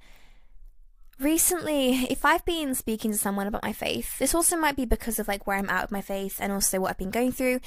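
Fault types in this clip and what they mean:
Nothing in this speech recording stands out as a technical fault, so there's no fault type to list here.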